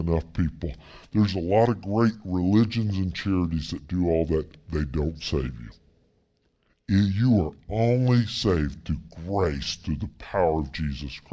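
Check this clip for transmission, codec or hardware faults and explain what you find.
The clip has a wrong sample rate fault that runs through the whole recording. The samples are being clocked out more slowly than they were captured, with no rate conversion in between. That fits audio recorded at 22 kHz but played at 16 kHz. Everything runs at 0.726 times normal speed and the pitch drops by about 5.5 semitones, so the speech sounds deep, dragged and sluggish, with timing and pitch shifted together by the same ratio.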